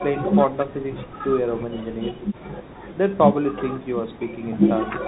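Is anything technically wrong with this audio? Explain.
Yes. Throughout the speech, the signal has passed through a Bluetooth CVSD headset codec, and the damage is plainly audible. The codec tracks the waveform with a single up-or-down bit per sample and an adapting step size, which fits a 64 kbps headset link. Everything above 4 kHz is gone, so the speech sounds narrow and boxy. Loud, bright passages outrun the step and distort, s sounds turn scratchy, and a granular hiss sits beneath the voice.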